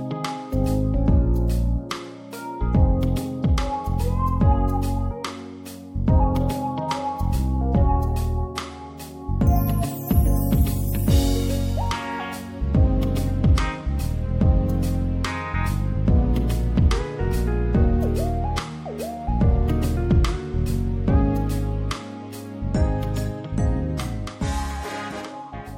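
At 1.90 s there's a bit of pre-echo: about 12 ms of hiss, roughly 11 dB up, creeping in just ahead of a sharp attack. It fits a roughly 26 ms transform window that never switched to short blocks, so the noise smeared forward and blunted the hit.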